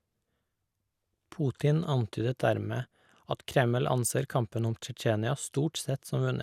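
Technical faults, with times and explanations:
Throughout, generation loss: the speech sounds swirly, smeared and hollow, with blurred consonant attacks and nothing above 16.7 kHz. Likely around four lossy passes that each requantise on a shifted frame grid, piling up noise and spectral holes. That fits repeated MP2 at 128 kbit/s.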